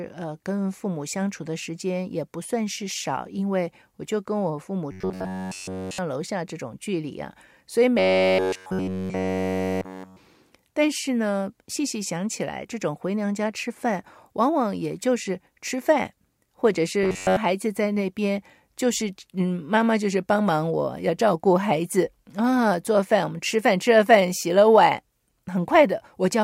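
Speech clip with robotic sound from repeated short buffers at 4.92–5.98 s, 7.99–10.17 s and 17.03–17.37 s: a metallic 93.8 Hz buzz, likely from a roughly 11 ms chunk looping while new audio stalls.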